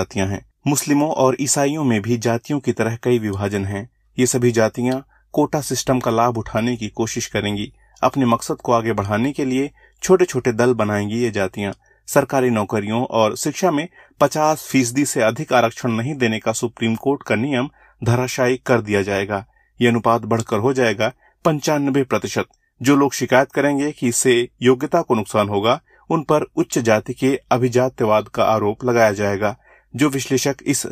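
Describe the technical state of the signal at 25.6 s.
At 25.6 s the speech signal is intact, with no audible dropout, glitch, distortion or other fault at that point.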